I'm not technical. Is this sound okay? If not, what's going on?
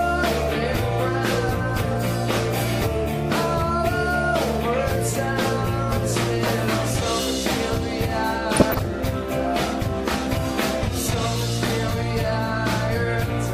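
No. DAB burbling at 8.51 to 8.85 s: weak digital radio reception let errors corrupt the data, making bands of sound blip briefly.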